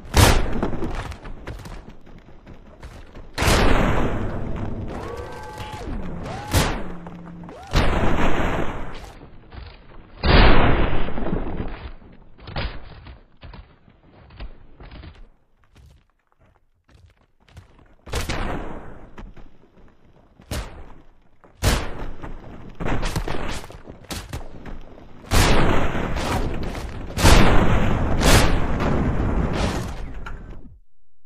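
From 9.15 s to 15.15 s the audio drops to a lower-bitrate version of the adaptive stream, as the player switches down after the connection slows. Everything above 5 kHz vanishes at once, leaving a dull, band-limited sound with swirly codec artefacts, which fits a fall from about 96 kbit/s to 16 kbit/s AAC. On a spectrogram the upper band is cleanly sliced off for those six seconds, with sharp vertical edges and no gap in the waveform.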